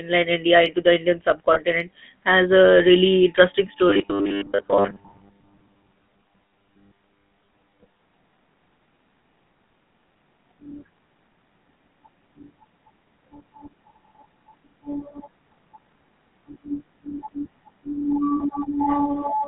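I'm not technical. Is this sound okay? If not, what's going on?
No. All the way through, the speech sounds buzzy and gravelly, thin and boxed-in like an old mobile phone call, with no crispness at the top and little depth at the bottom. That is the GSM full-rate codec, an early mobile-phone voice compressor. It rebuilds the voice from a rough model of the mouth and throat driven by a coarse pulse pattern. Only the band from about 150 Hz to 3.4 kHz gets through, and the roughness is plainly audible.

Twice the voice briefly turns into a short metallic ring instead of clean speech: from 1.54 to 1.60 seconds, and again from 18.37 to 18.51 seconds, the second one a little longer. These are lost GSM frames. When small chunks of the call's data go missing, the phone fills the gap by repeating the last good chunk, which produces that ringing smear.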